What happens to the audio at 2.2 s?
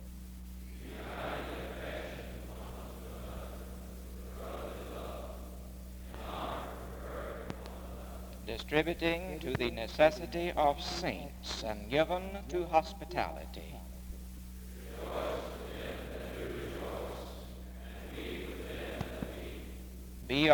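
Nothing goes wrong at 2.2 s; the audio plays through that moment intact, with no dropout, click or other fault.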